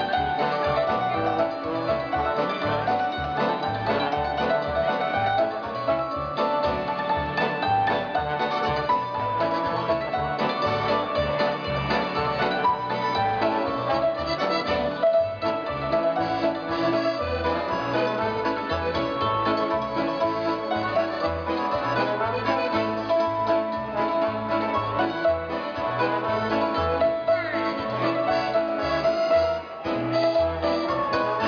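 No technical faults can be heard anywhere in this recording.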